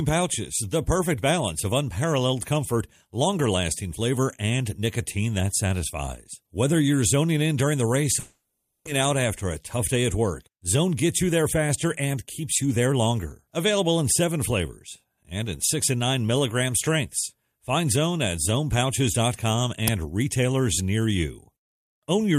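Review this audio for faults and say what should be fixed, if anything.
Long network dropout, 8.19 to 8.89 s: audio likely stopped arriving over the network, and the receiver filled about 680 ms by stretching the last sound into a fading buzz or hiss, never dropping to silence. Speech resumes with roughly 600 ms lost, and the delay moved by around 70 ms. To prevent it, fix the network path's packet loss or add redundancy such as forward error correction.

Jitter buffer speed-up, 9.49 to 10.19 s: after the dropout the jitter buffer held more audio than its target, so the receiver trimmed short pitch-period pieces again and again, around 50 ms in total. Speech runs at 105% speed with unchanged pitch and sounds hurried. To prevent it, let the buffer drain more gradually or cap the catch-up rate.

Uninitialised buffer, 19.88 s: a block was played before any audio had been written into it, so leftover memory values were output as samples. 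The result is a crack about 5.8 ms long, which fits a 256-sample buffer. To prevent it, zero every buffer before use or hold playback until it is filled.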